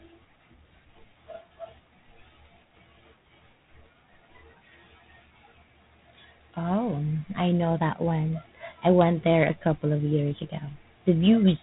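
A harsh, rasping hiss rides on the speech from start to finish, swelling and fading with its level, and nothing above 3.9 kHz gets through. This is G.726 ADPCM coding, which fits 24 kbit/s: too few bits per sample leave coarse prediction-error noise.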